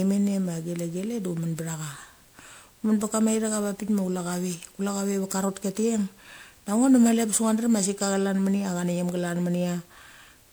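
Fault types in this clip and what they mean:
Generation loss: the speech sounds swirly, smeared and hollow throughout, likely from around seven rounds of MP3 re-encoding at what sounds like 128 kbit/s. A spectrogram shows flickering holes in the highs, nothing above 20.9 kHz, and blurred onset edges.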